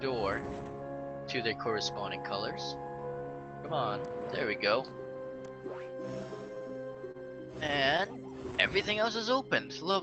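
Repeated stalls (stutter) run from 6.55 to 7.17 s: late packets drained the jitter buffer five times, each gap up to 27 ms bridged by continuing the previous sound, so it drags and stutters without losing anything. A jitter buffer slow-down follows from 8.53 s to the end, where repeated pitch periods add 113 ms, stretching the audio to 93% speed at unchanged pitch. The call path's coding tops out around 8 kHz.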